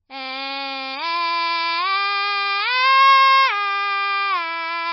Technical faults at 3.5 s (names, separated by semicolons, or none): MP3 compression